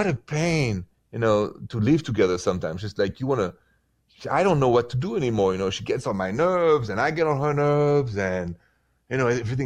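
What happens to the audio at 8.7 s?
Nothing goes wrong at 8.7 s; the speech there plays through intact, with no dropout, click, distortion or other fault at that point.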